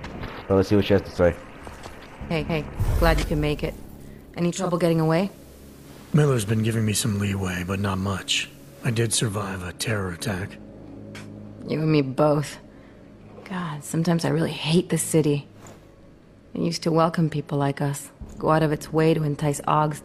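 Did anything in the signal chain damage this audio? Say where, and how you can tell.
Yes. The damage happened at the receiver, before recording. From 4.42 to 9.70 s a hybrid radio dropped to FM, the analogue broadcast of the same station, which is digital radio blending to analogue. Each switch is a smooth cross-fade of about 436 ms rather than a hard cut. The level shifts by about 1 dB, and hiss appears roughly 35 dB below the signal. That hiss is what separates this from a codec or network glitch, which would not add an analogue noise floor.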